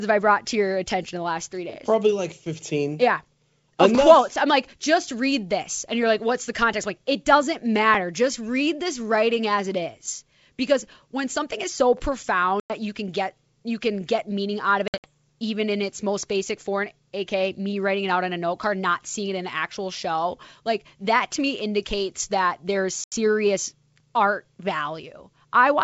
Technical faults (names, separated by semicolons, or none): packet loss on an ADPCM call